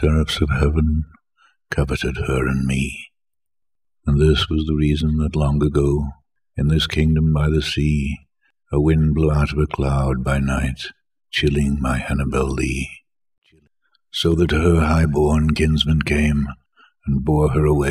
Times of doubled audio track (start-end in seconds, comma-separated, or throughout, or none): none